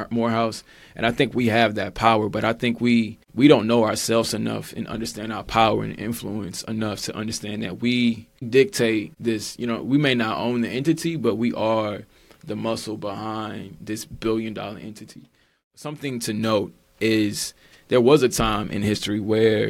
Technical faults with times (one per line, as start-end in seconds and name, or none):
none